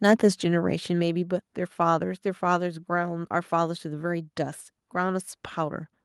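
From 0.05 to 0.26 s the loudest peaks are flattened and crackle harshly, likely microphone overload, with input driven about 4 dB past the converter's limit on a small fraction of samples. At 1.02 s voice and background drop together by about 3 dB in a single step, likely the microphone volume being stepped down by software reacting to that clipping.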